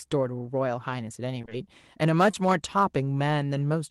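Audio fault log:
1.41 to 1.53 s, short concealed packet loss, three in a row: three consecutive 20 ms stretches of the call reached the decoder too late, so the receiver extended the preceding sound to fill each gap and blended it back into the real audio. Together they leave a smeared, wobbling patch about a tenth of a second long.
2.31 to 2.35 s, short concealed packet loss: one 20 ms stretch failed to reach the decoder in time, and the receiver bridged it by continuing the preceding sound before crossfading back. The result is a brief smear or wobble where the original detail is lost.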